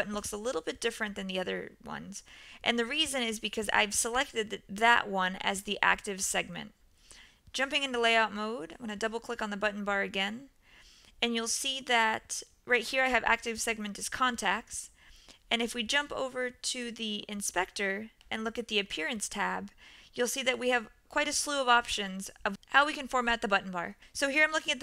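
No technical faults can be heard anywhere in the audio.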